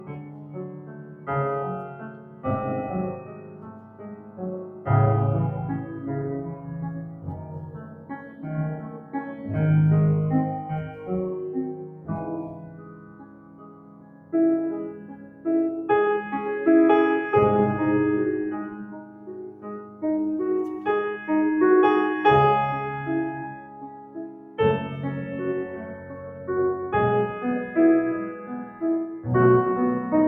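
A noise suppressor built for speech is running on this music for the whole clip. It treats sustained tones, room ambience and reverb tails as noise to be removed. Its gain swings by around 15 dB as it tracks the material, so transients pass while held notes and decays are pulled down. The result is a pumping, fluttering level and a thinned-out body to the mix.

The sound cut by the noise suppressor is clearest in six stretches: 0.0–4.87 s, 6.55–9.45 s, 10.88–15.45 s, 18.82–20.03 s, 23.52–24.59 s, and a brief dip at 28.66–28.82 s. In the first five, sustained material sinks by about 10 dB at its deepest. Within each stretch, much of the span is affected, as tails are cut short and fade early. The last event drops by about 8 dB and lasts only a fraction of a second.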